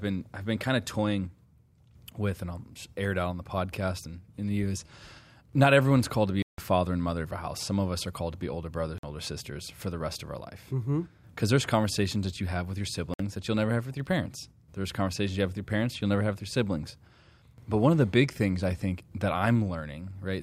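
The speech cuts to silence three times: from 6.42 to 6.58 s (about 159 ms) after "everyone's called to be", at 8.98 to 9.03 s (50 ms) after "to be older brothers", and at 13.14 to 13.20 s (57 ms) after "you have with your". Each is likely a Bluetooth stall, where radio interference held back packets until the headphones' buffer emptied. Unlike a codec dropout's warbled or smeared fill, these gaps are plain silence.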